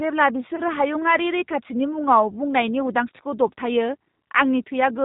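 Throughout, the speech carries G.729 codec coloration, consistent with an 8 kbit/s G.729A encode. The model rebuilds each 10 ms frame from a vocal tract filter, pitch predictor and sparse pulses, so nothing above 4 kHz survives, and the voice sounds plainly rough and synthetic.

From 0.56 to 0.61 s, packet loss concealed by the speech codec stretches the preceding sound out as it fades. About 20 ms went missing, consistent with two 10 ms frames being extrapolated. The voice stays weak or distorted briefly as the decoder recovers before "हायुङारि रैखाथिनि".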